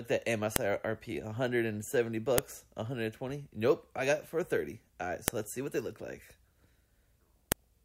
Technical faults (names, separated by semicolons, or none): file header played as audio